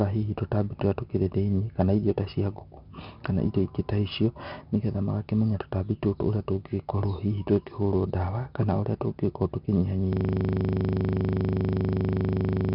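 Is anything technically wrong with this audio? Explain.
Yes, two faults are audible in this speech.

Throughout, 4-bit ADPCM compression codes each sample as a coarse step from a prediction, adding gritty hiss that follows the loudness and smears sharp attacks. A spectrogram shows nothing above 5.3 kHz and a noisy floor under loud passages, which fits a low-rate ADPCM stream.

From 10.13 s to the end, a system hang loop repeats one 40 ms piece of audio while the output hardware keeps cycling a stalled buffer. It sounds like a steady 25 Hz buzz. The waveform shows an identical block tiled dozens of times, and the spectrogram shows even harmonic lines.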